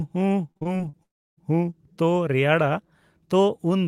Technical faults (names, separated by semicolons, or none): repeated packet loss (robotic sound); long network dropout